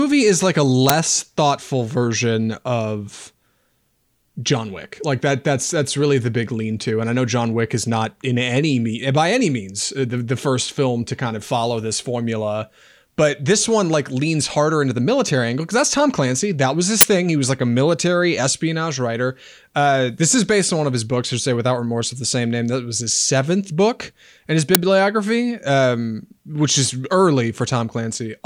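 At 0.89 s, 17.01 to 17.03 s, and 24.75 s the speech is interrupted by short, loud cracks or bursts of harsh digital noise, the signature of an uninitialised buffer. Each time, a block was sent to the output before any audio had been written into it, so stale memory contents were played as samples. The two brief cracks last about 6 ms, which fits a 256-sample buffer. The longer one, a burst of digital noise, lasts about 23 ms, which points to a 1024-sample block.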